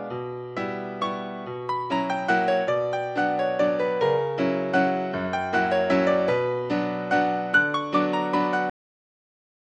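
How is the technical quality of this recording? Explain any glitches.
The recording has one fault, a cut-off end. At 8.70 s the sound stops abruptly mid-event and falls straight to digital silence for the final second, with no natural decay. The last buffers were never written or played back, so the sound is truncated.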